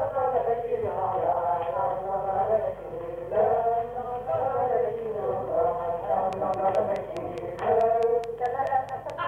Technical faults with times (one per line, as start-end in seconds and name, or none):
6.33-9.11 train of clicks